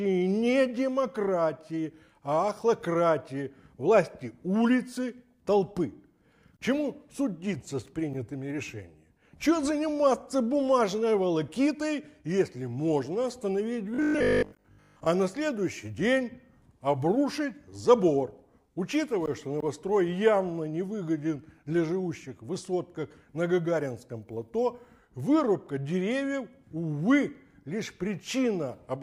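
New audio was likely arriving too seldom between 13.95 and 15.07 s, so the playback filled the gaps by looping a short buffer, producing robotic sound from repeated short buffers. Most of that stretch, roughly two thirds or more, is repeated material rather than fresh audio. The loop length fits a 20 ms buffer, which stamps a fixed 50 Hz buzz onto the sound, turning it rigid and metallic while only loosely tracking the original.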